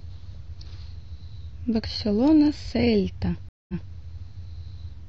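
A stream reconnect runs from 3.49 s to 3.92 s. The connection dropped, leaving about 0.2 s of silence, and a fresh decoder resumed mid-stream from a resent burst, so the speech returns 232 ms earlier and repeats a short stretch already heard.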